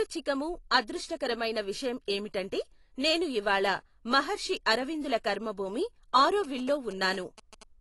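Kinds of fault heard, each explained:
AAC compression: The speech was likely passed through a low-bitrate AAC-LC encoder, which fits around 32 kbps. It quantises the spectrum coarsely and cuts everything above 11.5 kHz, so the voice sounds dull and smeared, with plainly audible codec damage throughout.
GSM signalling bursts: A nearby 2G phone was signalling to its network, and the audio circuit rectified its radio bursts. After "ఇవాళ మహర్షి అరవిందుల కర్మభూమి", from 6.44 to 7.63 s, a galloping 217 Hz buzz sits about 20 dB below the speech.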